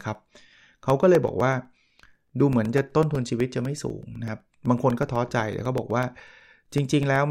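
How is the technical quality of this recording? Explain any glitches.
The recording has one fault, periodic USB or driver dropouts. From 0.15 to 7.16 s, something blocks the USB audio path every 0.125 s, blanking about 2 ms each time, so the speech carries a steady ticking eight times per second.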